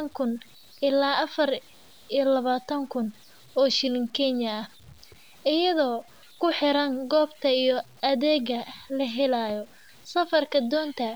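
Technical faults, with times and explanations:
Throughout: low bit depth without dither. Quiet speech turns gritty and sputters, with grain riding on the signal about 35 dB down, likely from truncation to around 8 bits. The waveform shows visible stair-steps, and the spectrogram shows a broadband haze that tracks each syllable and vanishes in pauses.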